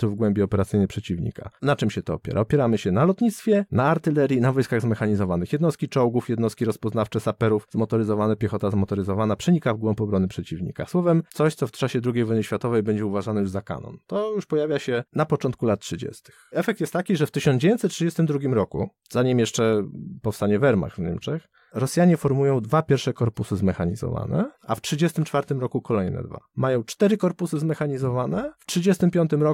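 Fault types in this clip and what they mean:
Nothing stood out on listening to this speech recording.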